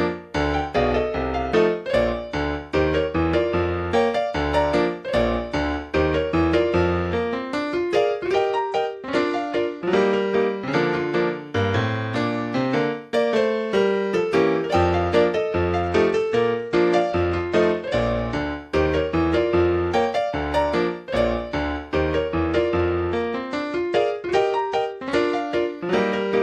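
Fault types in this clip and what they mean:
Bluetooth SBC bit pool drop: A congested link lowered the SBC bit pool. Three times, the treble dulls and gritty noise rises, then clears.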